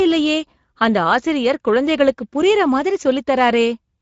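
From start to finish the speech has a grainy, hoarse texture, with a noisy edge, and nothing reaches above 7.6 kHz. This is plainly audible Speex codec damage. Speex models speech as a vocal-tract filter driven by a coded excitation signal. At the modest data rate this clip points to, around 17 kbps, that excitation is coarsely coded, so the fine detail of the voice comes back roughened and noisy.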